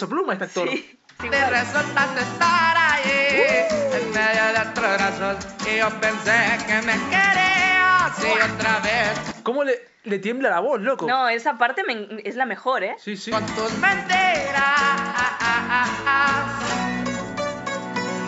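No technical faults can be heard anywhere in this recording.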